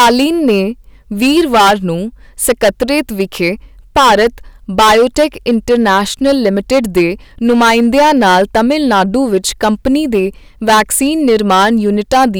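A harsh, buzzing fuzz sits on every loud syllable of the speech from start to finish, the sound of hard clipping. The signal is driven about 16 dB past what the stage can pass, so roughly one sample in fifteen is flattened at the ceiling, adding high harmonics.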